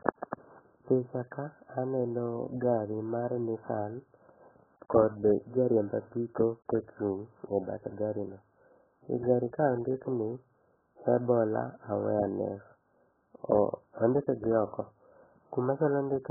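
From start to finish the speech is band-limited, with nothing audible above about 1.7 kHz, and it carries a heavily smeared, warbling texture. This points to AAC compression, likely AAC-LC at a very low rate in the region of 8 kbps. At that rate the encoder pulls its cut-off down drastically and quantises the remaining frequency lines coarsely. Sibilants lose their edge, consonants blur together, and sustained sounds take on a dull, swirling quality.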